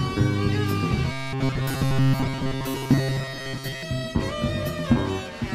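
From 1.12 to 3.83 s the audio takes on a robotic sound from repeated short buffers: a rigid, metallic buzz at 134 Hz that follows the original only roughly. The likely cause is audio arriving too seldom, so the same brief stretch, about 7.5 ms, is replayed in place of new material, roughly 70 percent of the time. A spectrogram would show evenly spaced horizontal harmonics at multiples of 134 Hz, and the waveform would show identical short cycles repeating.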